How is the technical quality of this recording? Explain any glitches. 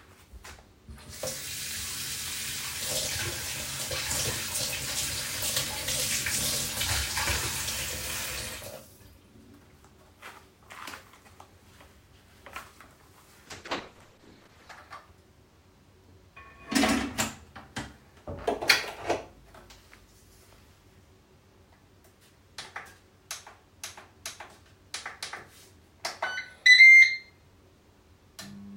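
One glitch stands out: a call bitrate drop from 13.48 to 14.89 s. The encoder was starved of bits for about 1.3 s. It coded coarsely and cut the highs. The sound turns muffled and watery, which fits a fall from roughly 96 to 11 kbps.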